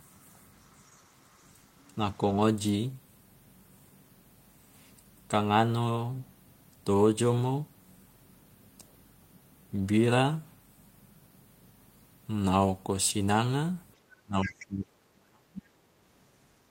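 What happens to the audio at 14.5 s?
Speech suppressed in double talk runs from 14.23 to 15.71 s, likely because the echo canceller ducked both sides at once. The speech sinks deeply, rather than cutting out cleanly like a dropout.

The other side's voice is leaking through from 14.43 to 14.66 s, likely as loudspeaker echo the canceller missed. It is a second voice well below the main speech, not a steady hum or noise.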